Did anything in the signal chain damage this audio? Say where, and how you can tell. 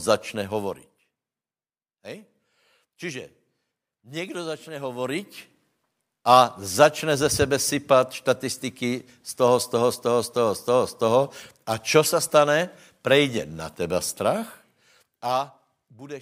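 No, nothing in the signal chain damaged this speech.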